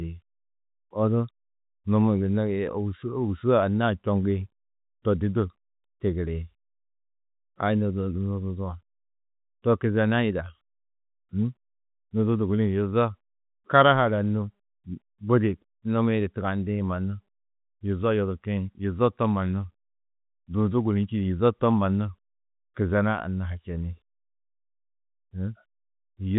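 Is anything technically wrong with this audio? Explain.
No, the speech shows no technical fault, and what can be heard is ordinary fixed-line telephone coding in G.711 A-law, with the audio band ending near 3.8 kHz and any quantisation noise kept faint beneath the signal.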